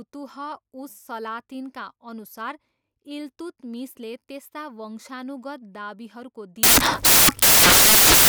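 From 6.63 s to the end, the speech collapses into samples built from the wrong bytes: the reader misassembles each sample, so the busy low bits end up as the big part of the value. You get a loud white-noise wash on the louder sounds.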